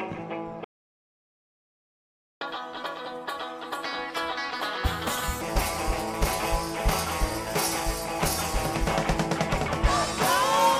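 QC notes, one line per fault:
0.64–2.41 s, playback stall: the sound cuts out mid-flow and stays silent for about 1.77 s before resuming. The likely cause is the player running short of buffered data or its output thread being blocked, so nothing reached the output until it recovered.
2.41–5.41 s, catch-up at higher speed: after the gap the audio runs at 1.5 times normal speed for three seconds, raising pitch by roughly seven semitones, as the player resamples its backlog to win back lost time before dropping back to normal.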